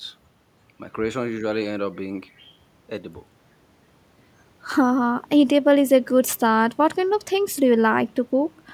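Nothing goes wrong in this bit of speech at any point, so there's no technical fault to walk through here.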